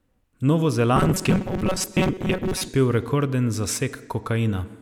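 From 0.96 s to 2.68 s the speech takes on a robotic sound from repeated short buffers: a rigid, metallic buzz pinned at 188 Hz that still loosely tracks the words. The likely cause is audio arriving too seldom, so a slice of roughly 5 ms, one over 188 Hz, is replayed in place of skipped material, with about half the signal being repeats. A spectrogram shows flat, evenly spaced harmonic lines at multiples of 188 Hz, and the waveform shows identical cycles stamped back to back.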